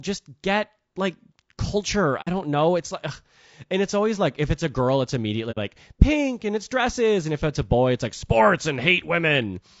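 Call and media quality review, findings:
Speech rough and grainy for the full clip, noise filling the gaps between harmonics, top band thin and synthetic-sounding. Likely low-delay AAC compression (AAC-ELD): short frames resolve pitch harmonics poorly and spend more bits, and the damage here suggests around 32 kbps.

Soft-edged dropouts at 2.21–2.28 s and 5.51–5.58 s, sound fading out and back in. AAC frame loss with muting: lost frames decoded as zeroed spectrum, with overlapping windows smoothing the edges. Each hole is about 70 ms, consistent with two lost frames.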